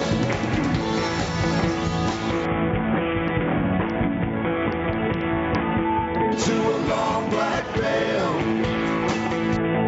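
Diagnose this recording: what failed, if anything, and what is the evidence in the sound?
Gain pumping runs through the whole clip. The gain swings by about 10 dB. Levels sit squashed together. The likely cause is gain set far too high at the input, with a fast limiter clamping it back.

A Bluetooth SBC bit pool drop occurs from 2.45 to 6.32 s, and again from 9.56 s to the end. The treble dulls and gritty noise rises. This fits the bit pool falling from 31 to 6, about 55 kbps, starving the upper sub-bands on a congested link.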